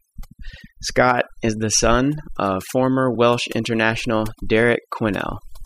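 Speech throughout carries overdone noise removal: a noise reducer set far too aggressively has cut individual frequency bands down or out wherever they sat near its noise estimate, taking quiet speech detail with them. Between phrases the background drops to near silence sprinkled with twinkling specks. On a spectrogram this shows as empty regions dotted with isolated bright time-frequency flecks, with speech harmonics looking patchy and ragged at their edges.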